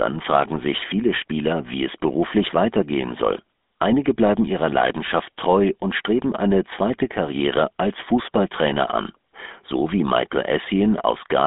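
From start to finish the speech carries GSM full-rate codec damage, plainly audible as a buzzy, gravelly roughness. The vocal tract is modelled and driven by sparse regular pulses, which fits a 13 kbps full-rate stream. On a spectrogram, energy sits within roughly 200 Hz to 3.6 kHz, with nothing above 3.8 kHz.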